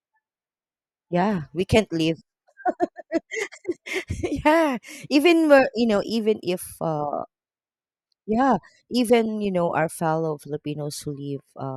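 No audible technical faults in this speech recording; nothing in it points to a problem anywhere in the chain.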